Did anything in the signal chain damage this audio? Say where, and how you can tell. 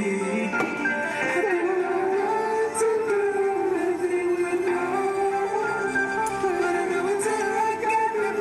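No, nothing stood out on listening that would point to damage anywhere in the signal chain.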